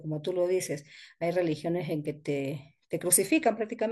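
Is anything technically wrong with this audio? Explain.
No, nothing technically wrong can be heard in this recording of speech. No dropouts, clipping, noise bursts or other playback faults turn up anywhere in it.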